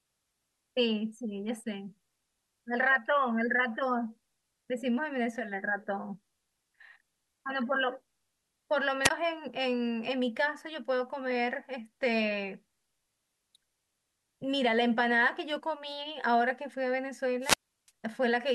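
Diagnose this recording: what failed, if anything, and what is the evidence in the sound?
Wireless microphone squelch dropout at 9.03 to 9.10 s and 17.41 to 17.91 s, in the analogue radio link ahead of the wiring. The FM signal fades, hiss rises, and the receiver's squelch mutes the speech for 17 ms, then for 345 ms.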